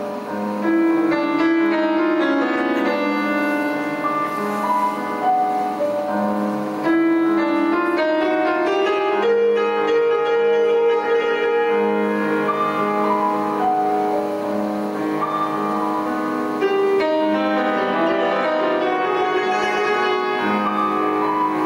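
Gain pumping runs through the whole clip: the gain swings by around 10 dB, pulling down under each loud sound, likely from input gain set far too high with a fast limiter clamping it. The waveform looks flattened and dense, with loud and soft parts pulled closer in level.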